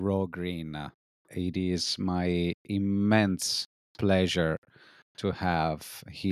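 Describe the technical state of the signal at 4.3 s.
At 4.3 s the speech signal is intact, with no audible fault at that moment.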